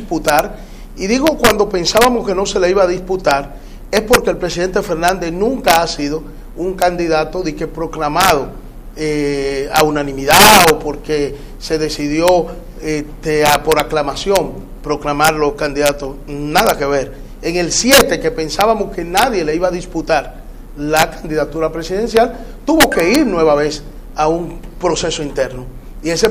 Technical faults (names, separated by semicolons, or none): integer overflow